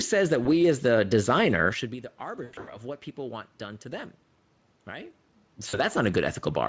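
At 0.43 s, before "as the designer should", at 2.43 to 2.79 s, between "designer should be the" and "what people want done", and at 5.69 to 5.78 s, VoIP packet loss concealed by the speech codec smears speech into a fading buzzy tone or coloured noise. It is not a silent dropout, and the distortion lingers after packets resume.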